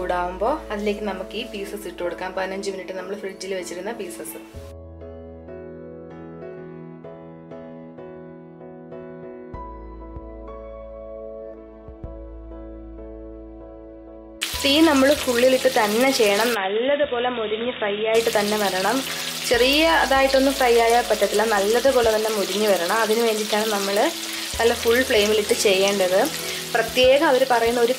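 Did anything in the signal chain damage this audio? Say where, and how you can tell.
Yes. From 16.55 to 18.15 s the sound turns dull and boxy, with nothing above 3.8 kHz, about 5 dB quieter, and a faint new noise floor, with no gap at either edge. The likely cause is the input switching to a poorer device. Its own level and noise set this apart from a codec bandwidth drop.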